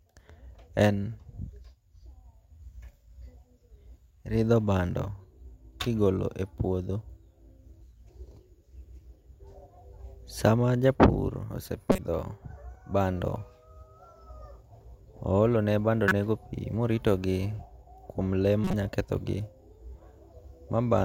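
A speech recording with a corrupt frame decoded three times: 11.92 to 11.99 s, 16.08 to 16.12 s, and 18.64 to 18.74 s. Each is a short chirpy burst, loudest at 16.08 s, around -10 dBFS. Damaged compressed frames were played anyway, spreading energy at wrong frequencies. The last spans several frames.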